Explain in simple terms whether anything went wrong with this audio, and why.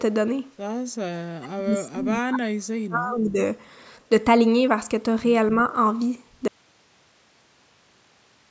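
From 1.35 to 3.38 s the speech sinks very low: speech suppressed in double talk, likely an echo canceller muting it while both sides talked, unlike a clean cutout.

At 6.48 s the sound stops abruptly and only faint hiss continues to the end. This is an audio dropout to a faint residue, not a natural pause or fade.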